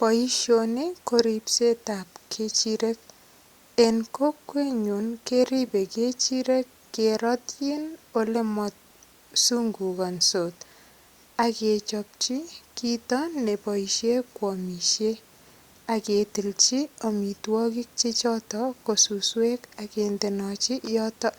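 No technical faults can be heard anywhere in the speech recording. Nothing interrupts or alters the audio at any point, so there are no events to place in time.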